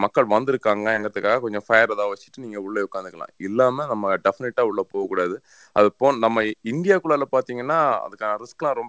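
No technical faults can be heard anywhere in the speech. It has passed through a WebRTC call path, and nothing reaches above 8 kHz, which fits a wideband codec such as G.722.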